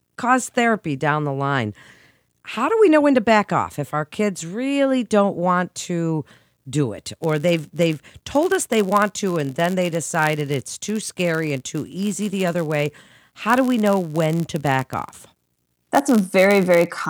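From 6.93 s to the end, a block size mismatch (padded) sets in: one stage hands over blocks slightly shorter than the next stage expects, and zeros fill the remainder. Those tiny gaps recur about 91.5 times a second, giving a steady buzz, and the speech runs marginally slow (0.996×) with its timbre unchanged.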